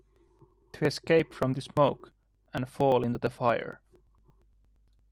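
Periodic USB or driver dropouts run from 0.16 s to 4.99 s. Something on the system stalls the USB bus or audio driver every 0.115 s, and each stall skips roughly 10 ms of the speech outright rather than filling it with silence. The result is some forty evenly spaced ticks, close to nine per second, each a small jump where a sliver of sound vanishes. They are audible only while the speech is sounding.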